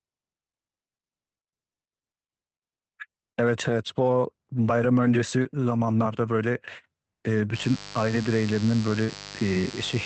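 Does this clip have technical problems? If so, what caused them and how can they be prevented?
Yes. Short concealed packet loss hits around 5.43 to 5.61 s and 9.04 to 9.10 s. About 20 ms and then 40 ms of audio arrived too late, and the decoder papered over each gap with a brief smear. A deeper jitter buffer or forward error correction on the link would prevent it.

Mains buzz comes in at 7.52 s and runs to the end. It's a raspy 50 Hz harmonic buzz about 15 dB under the speech, from switching spikes leaking into the chain. Shielded, properly grounded cabling kept away from dimmers and cheap power supplies would prevent it.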